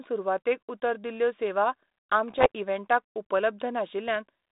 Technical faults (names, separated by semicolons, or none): bit errors on an ADPCM link